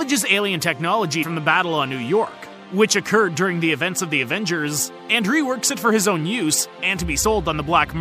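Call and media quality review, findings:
Brief smeared blip at 1.22 s with a small forward jump, about 50 ms of audio gone. Compressed frames skipped: roughly two frames not played, missing from the file or rejected by the decoder. Overlapping frames soften the join, so no hard click.

Same blip at 7.23 s, shorter jump of about 30 ms, roughly one frame. Skip lengths fit a 26.1 ms codec frame. Component: decoder or container delivery path.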